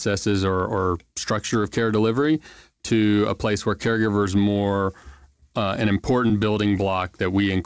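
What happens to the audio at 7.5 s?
Nothing goes wrong at 7.5 s: the speech continues intact through the G.722 call path, with its band ending at 8 kHz.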